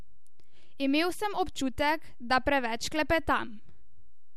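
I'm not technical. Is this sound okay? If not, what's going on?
No. The whole speech recording has a DC offset: the waveform sits slightly off centre throughout. Unlike hum or rumble, you can't hear it, but it wastes loudness headroom.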